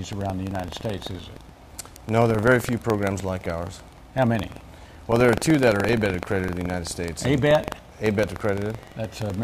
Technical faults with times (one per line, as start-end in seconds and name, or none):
0.00-9.44 buffer tearing